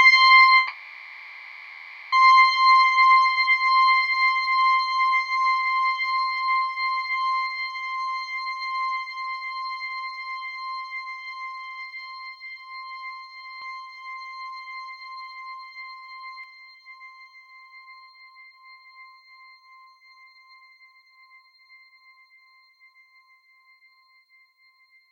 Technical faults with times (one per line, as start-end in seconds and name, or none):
0.57-2.13 long network dropout
13.62-16.44 doubled audio track